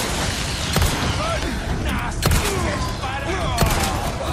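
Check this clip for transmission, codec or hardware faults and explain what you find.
One fault stands out: damaged data in a compressed stream, from about 1.42 to 1.46 s. A short stretch of the encoded data was corrupted, so the decoder misread those frames, lost sync and skipped forward to the next valid frame header. The result is a brief disruption of roughly 30 ms.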